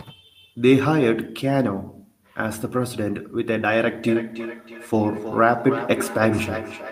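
From 4.08 s to the end at 6.92 s, the speech is followed by a feedback echo between two devices: a second device on the same call replays this microphone's signal into the room, and the microphone captures it again. The local echo canceller cannot remove sound it did not play itself. Each phrase returns about 300 ms later as a thinner, ringing copy, peaking at about 10 dB below the speech. Room reverberation would smear continuously instead of producing distinct, evenly spaced repeats.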